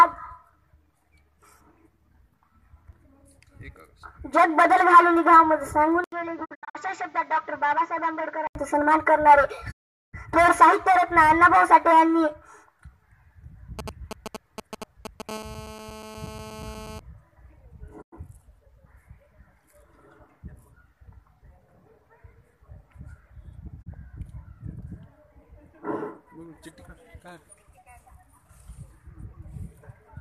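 At 6.04 s the sound goes dull and boxy until 8.55 s, with an 80 ms gap at the changeover. That's likely an input switched to a poorer device: nothing above 7.5 kHz, the level drops by roughly 10 dB, and a new noise floor sits around 30 dB under the signal.

Inside that stretch, from 6.44 to 6.77 s, there's a digital broadcast dropout. The receiver lost good frames and muted in a few short holes, 192 ms missing in total over 288 ms, the longest 72 ms, each fading in and out over about 20 ms. It cuts out again from 9.70 to 10.15 s, a solid 408 ms hole, then for 96 ms at 18.01 s and a brief 24 ms blip at 23.81 s. Whatever was sent during those gaps is gone.

From 13.79 to 15.31 s you get GSM signalling bursts. A nearby 2G phone is talking to its network in short groups, and the audio circuit rectifies them into a galloping dit-dit-dit of short 217 Hz buzzes, sitting roughly 15 dB below the signal.

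Right after, at 15.31 s, that settles into steady GSM phone buzz until 17.00 s, the phone now transmitting in bursts 217 times a second as in a call. It's a hard, raspy 217 Hz tone full of harmonics, about 22 dB under the signal and unrelated to it.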